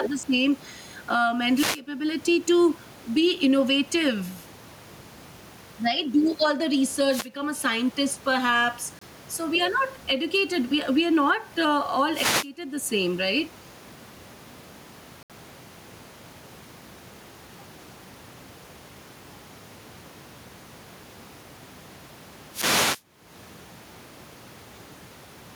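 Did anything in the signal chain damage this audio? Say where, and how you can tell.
Yes. Gain pumping runs through the whole clip, at the capture end. The room background sits about 34 dB under the speech, the gain swings by around 15 dB, and loud and soft parts sit closer in level, so the sound is squashed. That's likely mic gain set far too high with a fast limiter clamping it.

There are also two Bluetooth stalls at playback: the sound cuts to silence for 25 ms from 8.99 to 9.02 s, right after "a scientist perhaps", and for 69 ms from 15.23 to 15.30 s, then picks up again. Likely interference delayed packets and the headphone buffer ran dry.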